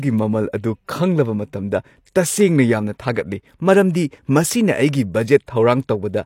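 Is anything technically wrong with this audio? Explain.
Yes, there's a pre-echo at about 5.46 s. The codec spreads its quantisation noise across a whole block, so a sharp attack late in that block drags hiss into the quiet just before it, about 17 ms of it, and the onset sounds smeared.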